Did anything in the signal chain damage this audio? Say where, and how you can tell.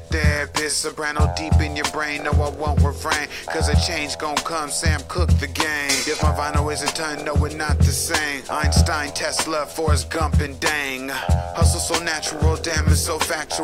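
No, nothing damaged this audio.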